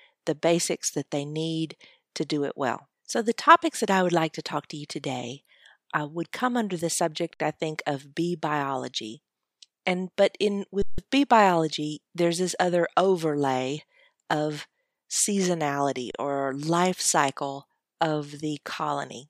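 A speech clip with three underruns with held sample, at 7.34 s (60 ms), 10.82 s (160 ms) and 16.11 s (29 ms). The output holds its last value, so the waveform freezes flat rather than falling to zero. Speech resumes without skipping anything, so unlike a dropout there is no hard click.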